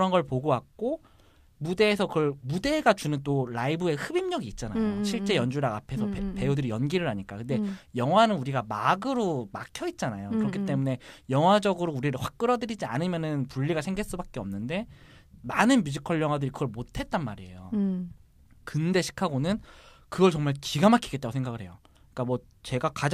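Nothing goes wrong anywhere in this speech recording, so there's no technical fault to point to.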